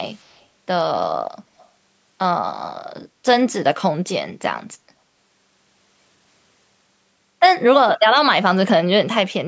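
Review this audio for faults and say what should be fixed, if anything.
Echo leak at 0.14–0.45 s and 1.60–1.67 s: a very faint copy of the speech trailing 150 ms behind, likely left by an echo canceller that missed loudspeaker pickup. A spectrogram shows weak, 150 ms-shifted duplicates of the harmonic bands. Fix it with better echo cancellation or a headset at that end.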